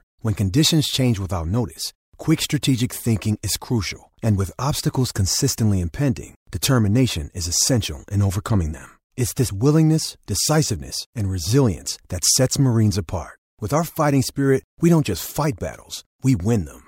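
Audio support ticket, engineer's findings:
Compressed frames skipped at 9.47 s: a short smeared blip where about 50 ms of speech drops out, consistent with the decoder losing roughly two 26 ms frames.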